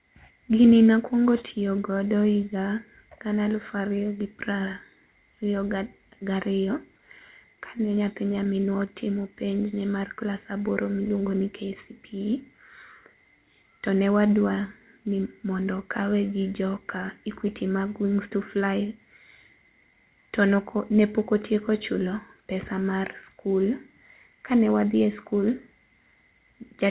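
From 6.98 to 8.46 s there are scattered short gaps: about seven tiny holes, none much over 15 ms, patched by stretching the last sound, so you get little ticks and smears. Right after, from 8.53 to 10.84 s, a jitter buffer slow-down repeats pitch periods to rebuild its reserve, running at 94% speed, adding 138 ms, drawn out at unchanged pitch. Then from 12.99 to 13.89 s a jitter buffer speed-up trims about 100 ms of pitch periods, running at 111%, so it sounds rushed, all within the call path's dull 4 kHz ceiling, which fits G.711 mu-law.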